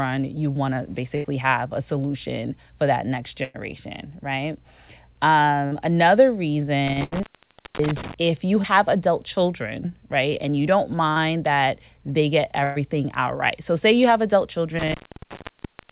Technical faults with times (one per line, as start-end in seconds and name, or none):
1.16-1.26 burst of packet loss
3.44-3.56 burst of packet loss
5.66-5.73 burst of packet loss
6.88-8.14 intermittent contact
7.03-7.14 burst of packet loss
8.62-8.66 short concealed packet loss
11.12-11.18 short concealed packet loss
12.64-12.78 burst of packet loss
14.79-15.91 intermittent contact